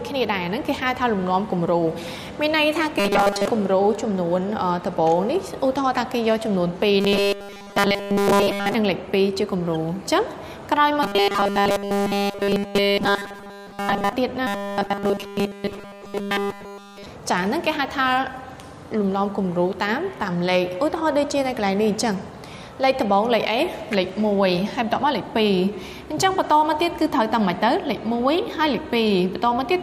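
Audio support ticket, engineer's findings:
Robotic sound from repeated short buffers at 3.00–3.47 s, 7.01–8.74 s, 11.03–14.13 s and 14.47–17.06 s. Rigid metallic buzz at a fixed 200 Hz. Most of the first event affected; the other three fully. Likely cause: audio delivery stalling, with playback looping the last 5 ms chunk while the real audio is skipped. The 200 Hz buzz matches a 5 ms repeat.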